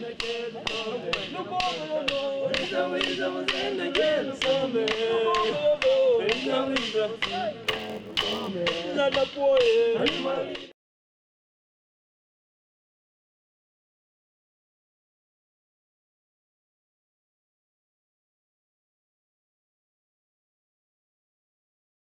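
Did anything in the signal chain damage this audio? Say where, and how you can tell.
Yes. From 7.63 to 8.49 s a buffer-stage block size mismatch (padded) adds an 86.1 Hz buzz and slows the audio to 0.938 speed with its timbre unchanged, which fits a 512-sample read. The waveform shows regular short gaps, and the spectrogram shows thin vertical stripes.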